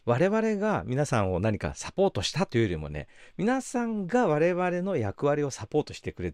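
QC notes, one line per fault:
No faults heard in this speech clip.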